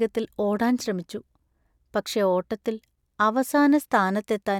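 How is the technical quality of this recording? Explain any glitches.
No technical glitches are audible.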